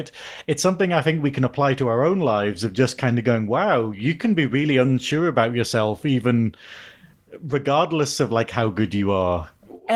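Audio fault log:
No faults heard in this speech clip.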